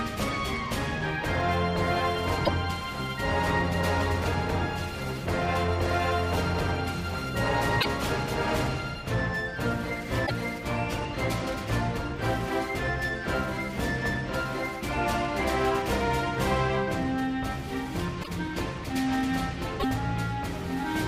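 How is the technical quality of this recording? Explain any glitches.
The recording has five short glitches from damaged data in a compressed stream. They fall at 2.42 to 2.49, 7.77 to 7.86, 10.23 to 10.31, 18.20 to 18.28 and 19.76 to 19.85 s. Each lasts under a tenth of a second. Corrupted bytes made the decoder misread frames and lose sync until it found the next frame header. Each one breaks through as a brief chirp, squawk, click or gap in the sound.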